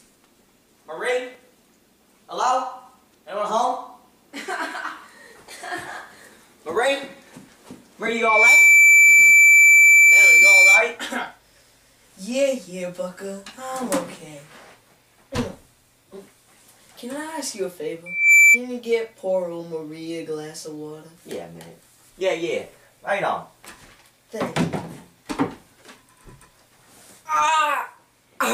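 A single piercing tone near 2.3 kHz swells up over a fraction of a second at 8.07 s and holds to 10.97 s, returning briefly from 18.06 to 18.60 s, about 15 dB above the surrounding sound. This is loudspeaker feedback squeal: the microphone re-amplifies its own loudspeaker output until that frequency runs away.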